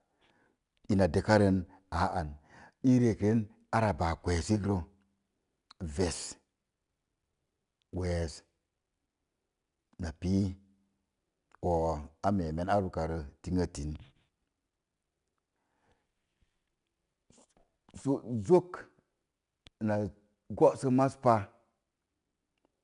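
A speech clip carrying 4-bit ADPCM compression from start to finish. Each sample is coded as a coarse 4-bit step away from a prediction, with a step size that adapts. The resulting error is a gritty hiss riding on every loud syllable, clearly audible and rising and falling with the level. Sharp onsets smear where the step cannot grow quickly enough. Nothing is present above 10.6 kHz, which points to a sample rate near 22 kHz and a bitrate around 89 kbps.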